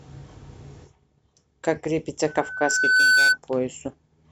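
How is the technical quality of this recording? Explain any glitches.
The recording has one serious glitch. From 2.27 to 3.38 s, a 1.5 kHz tone swells over under a second into a squeal about 10 dB above the speech. This is loudspeaker feedback squeal, where the microphone re-amplifies its own loudspeaker output.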